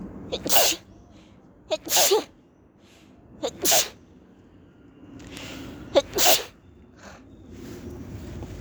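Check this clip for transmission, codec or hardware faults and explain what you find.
One fault is present. At 5.37 s a single sharp tick cuts through the audio, peaking at about -15 dBFS and bearing no relation to the surrounding sound. This is a bit error spike: a flipped bit in memory or on a digital link throws three consecutive samples off by a power of two before they snap back, producing a brief broadband click.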